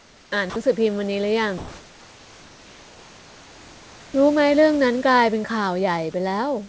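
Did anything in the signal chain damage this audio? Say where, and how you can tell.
Yes. Comfort noise in place of the background, in call processing: at 0.00 to 0.32 s and 1.58 to 4.14 s the room's textured background becomes steady, featureless hiss, about 4 dB and 2 dB quieter, likely from discontinuous transmission. Unlike noise suppression, it's a synthetic fill rather than gated room noise.

Sound dropped by the voice detector, same stage: from 0.50 to 0.56 s, 60 ms of sound turns into that same flat noise. Packet-loss concealment would repeat or smear the sound instead.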